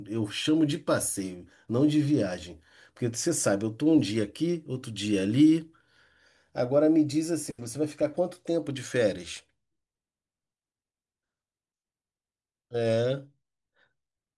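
No technical faults can be heard anywhere in the recording.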